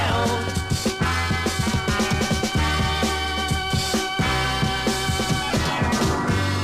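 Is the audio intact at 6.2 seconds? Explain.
Yes, the audio is intact at 6.2 seconds, with no dropout, click, distortion or other fault at that moment.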